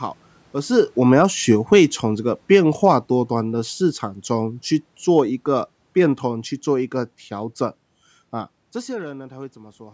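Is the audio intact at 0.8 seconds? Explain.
No, not quite. At 0.8 s you're just inside a stretch of automatic gain falling that runs from about 0.58 to 6.99 s. The gain control decided the input was too loud or its background noise too strong and started easing its gain down, ending roughly 13 dB lower, about. So at that moment the level is still fairly loud but already starting to slide, and the room noise behind it sinks right along with it, which gives the drop away as processing.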